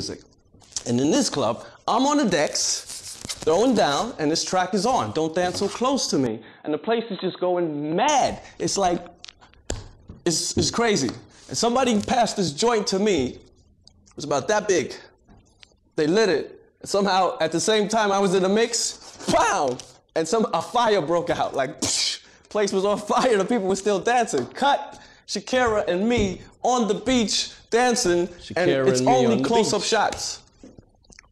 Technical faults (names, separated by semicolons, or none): input switched to a poorer device